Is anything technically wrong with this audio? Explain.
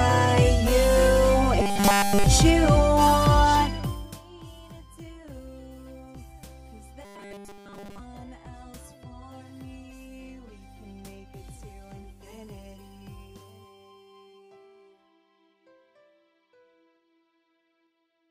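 Yes. Between 1.62 and 2.26 s, and again between 7.05 and 8.00 s, the sound turns into a rigid 200 Hz metallic buzz: robotic sound, likely from repeated short buffers, with a 5 ms chunk looped almost continuously. A spectrogram shows evenly spaced 200 Hz harmonic stripes, and the waveform shows an identical short cycle.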